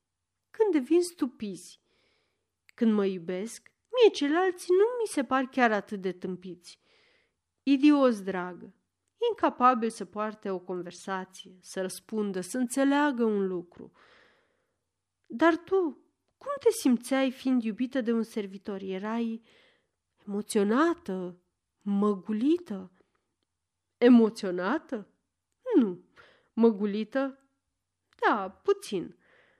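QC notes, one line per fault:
24.62–25.13 s, CD scratch ticks: three short ticks, the longest well under a millisecond, spaced at a regular interval in the speech. A surface blemish corrupted more data than error correction could rebuild on successive disc rotations, so the player interpolated or muted those samples once per turn.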